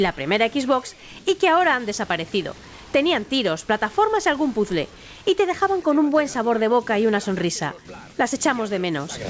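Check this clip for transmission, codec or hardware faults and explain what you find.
No faults can be heard anywhere in this clip.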